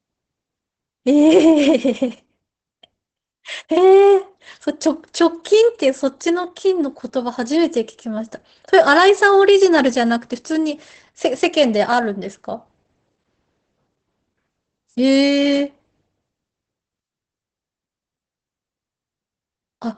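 Throughout, the speech carries Opus voice compression in its SILK mode. A spectrogram shows a hard ceiling at 8.6 kHz, and the coarsely coded excitation makes the voice plainly muffled, hoarse and slightly robotic, which fits a low bitrate of around 12 kbps.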